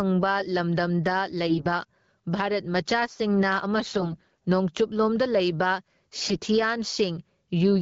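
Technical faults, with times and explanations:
Throughout: gain pumping. The gain swings by about 15 dB, so loud and soft passages sit squashed close together. This is likely a far too high input gain being pulled back by a fast limiter or compressor.
1.46–1.66 s, 3.78–4.37 s, 6.16–6.39 s: AMR bit errors. The speech turns hoarse, scratchy and gargly while keeping its rough pitch and level, worst in the longest burst. Bits flipped in the weakly protected parts of AMR frames, about 7 to 10 percent of them, misplacing excitation pulses and skewing fine pitch, gain and spectrum values.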